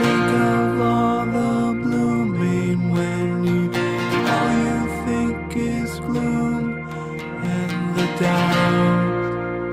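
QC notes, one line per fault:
No technical fault can be heard anywhere in the signal; it stays steady and intact throughout.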